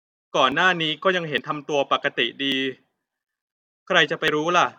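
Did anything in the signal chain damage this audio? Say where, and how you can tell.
Yes. At 0.52, 1.38, 2.52 and 4.28 s the speech skips ahead with no gap, losing a few tens of milliseconds each time, the most at 4.28 s. Likely a dropped buffer (overrun) in the driver: capture lagged, and the hardware overwrote unread samples.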